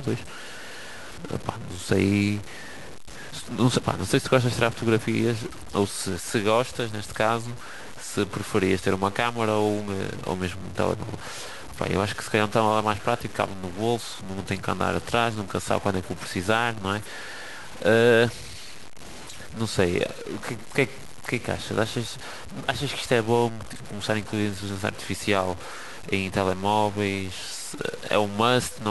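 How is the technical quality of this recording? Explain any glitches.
The quality is poor throughout. A likely stuck bit in the converter offsets samples by about -35 dBFS, adding harsh buzzy distortion to the speech and audible noise in pauses.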